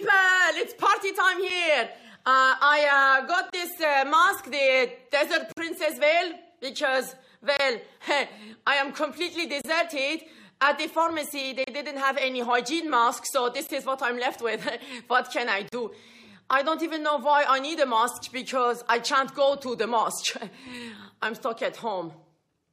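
The audio has a gap between stream segments, heard as hard-edged dropouts to silence roughly every 2 seconds: at 1.50 s, 3.50–3.53, 5.52–5.57, 7.57–7.60, 9.61–9.64, 11.64–11.68, 13.67 and 15.69–15.73 s. Each lasts between 6 and 49 ms. The regular spacing fits 2-second segments whose timestamps leave a small hole at each boundary, which the player pads with silence. The holes are inserted time, so none of the audio itself is lost.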